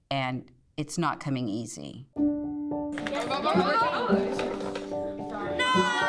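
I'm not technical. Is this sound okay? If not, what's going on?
Yes, this sound is okay, and there's nothing going on with it that you need to worry about.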